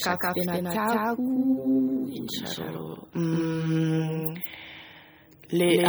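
From the start and running the whole way through, the speech is heard twice: a second full-band copy trails about a fifth of a second behind at roughly the same level, with no decay or room colour. That's a doubled audio track, likely a second capture path or an edit stacking two copies out of step.

Across the whole clip there's also clear MP3 compression damage. Weak detail flickers in and out, giving a watery, swirly texture with metallic chirps on s sounds and smeared attacks, which fits a low bitrate of around 48 kbps.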